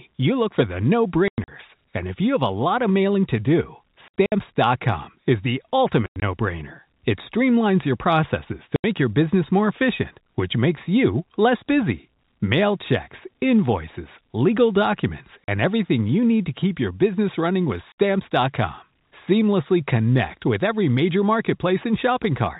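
Packet loss filled with silence: lost packets, which fit 20 ms units, were replaced by silence, cutting hard-edged gaps into the telephone-band speech at 1.28–1.48 s, 4.08–4.32 s, 6.06–6.22 s after "is the", 8.76–8.84 s before "your business more efficient", 15.44–15.48 s before "everything you need", and 17.92–17.95 s.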